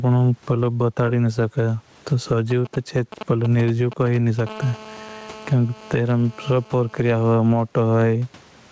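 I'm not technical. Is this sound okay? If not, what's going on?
No. Three things go wrong in this speech recording.

Gain pumping, throughout: the microphone level is likely set far too high, so an automatic limiter keeps yanking it down. Loud and soft parts end up closer in level, so the speech sounds squashed.

GSM signalling bursts, 2.5 to 4.4 s: a nearby 2G mobile phone sends short radio bursts that the audio electronics pick up. You hear a galloping dit-dit-dit of short buzzes.

GSM phone buzz, 4.47 to 7.33 s: the same phone, now in a call, transmits 217 times a second. That leaks in as a steady, harsh, raspy buzz under the speech.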